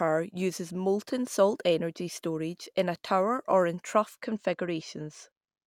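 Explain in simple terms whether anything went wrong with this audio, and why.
From 4.23 s on, channel delay (comb filtering): one side lags slightly, carving a fixed gap near 10 kHz, so speech sounds dulled at the top rather than hollow.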